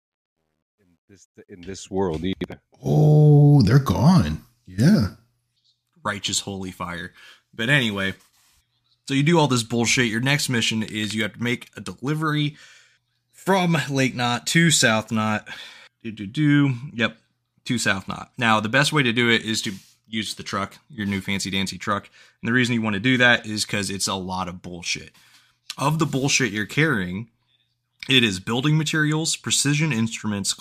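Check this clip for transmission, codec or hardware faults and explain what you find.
There's one fault, right at the start. From 0.0 to 2.17 s the speech fades in with truncation distortion, worst up to about 1.26 s. The fade stage keeps too few bits and adds no dither, which fits a 12-bit path, so the quietest part collapses into coarse steps. It sounds gritty before the level smooths out by 2.17 s.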